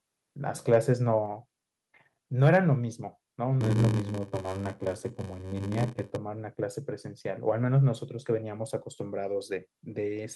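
A speech recording with three kinds of technical fault. Microphone overload at 0.73–0.77 s and again at 2.44–2.57 s gives the loudest syllables a harsh, crackly edge. Peaks run about 2 dB and about 3 dB past the converter's limit, likely because the input gain was set too high. A few percent of samples are clipped, which shows on the waveform as flat-topped peaks and on a spectrogram as brief broadband smearing. At 1.26 s the microphone volume steps down by about 3 dB, likely the call software cutting input gain after the first distorted peak. Voice and background drop together, seen as a sudden step in the waveform envelope. From 3.60 to 6.17 s a block size mismatch, padded with zeros, inserts a short silent gap in every block. It produces a buzz at about 94 Hz and runs the audio at 0.861 times normal speed, with the timbre unchanged, which fits a 512-sample read buffer. Waveform notches repeat at that rate, and the spectrogram shows evenly spaced vertical stripes.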